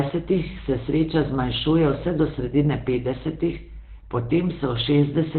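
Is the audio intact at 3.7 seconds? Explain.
No, Opus compression runs throughout, including 3.7 s: nothing above 4.2 kHz, muffled and hoarse speech, likely from its narrowband speech mode at a very low bitrate.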